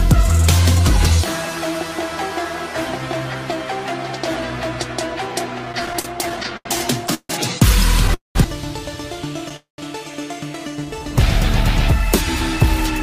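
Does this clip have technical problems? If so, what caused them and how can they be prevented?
Yes. Between 5.65 and 7.32 s the audio drags and stutters through 14 short gaps, the longest 152 ms, where the last sound is held on. These are repeated stalls (stutter): packets kept arriving late or too slowly, so the jitter buffer ran dry again and again, and about 0.38 s was filled with nothing lost. A steadier network path, or a deeper adaptive jitter buffer, would prevent this.

At 8.14–8.38 s and 9.56–9.81 s the sound hangs as a fading continuation, then drops to silence for about 0.15 s and 0.14 s before resuming where it stopped. Each is a call audio freeze, likely from packets held up in transit that emptied the jitter buffer and inserted roughly 0.2 s of delay. Reducing network congestion, or prioritising the audio traffic, would prevent these freezes.

From 10.79 to 11.00 s the sound slows to 86% speed at unchanged pitch, drawn out, as 39 ms was added. 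This is a jitter buffer slow-down: the receiver repeated single pitch periods to rebuild its reserve after running low or raising its target delay. More stable packet delivery would make this correction unnecessary.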